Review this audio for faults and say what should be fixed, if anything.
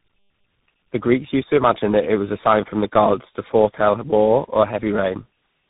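Tandem speech coding runs through the whole clip: the speech has been decoded and re-encoded across several codec boundaries, with each stage compressing the previous stage's errors. The result is rough, muffled and warbly, with nothing above 3.8 kHz. The texture points to three speech coders in sequence, with a final slope-delta stage, consistent with an iLBC to GSM full rate to CVSD path joined through G.711 links. Prevent it by negotiating one codec end to end, or passing the coded stream through transcoder-free, so the speech is compressed only once.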